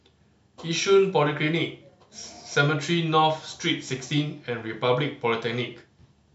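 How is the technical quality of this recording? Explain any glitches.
The recording has no technical glitches, and the signal stays continuous and intact throughout.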